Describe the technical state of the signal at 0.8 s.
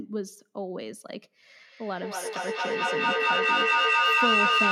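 At 0.8 s the speech signal is intact, with no audible technical fault at that point.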